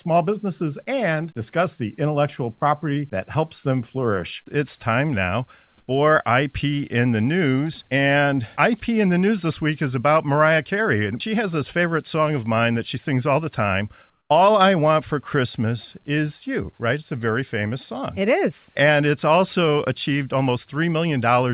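At 5.78 to 5.88 s and 14.1 to 14.3 s, the quiet background turns briefly into flat, featureless hiss, the second about 8 dB quieter, the first only about 1 dB different. This is likely comfort noise in place of the background, generated during transmission pauses on a call path that carries nothing above 4 kHz.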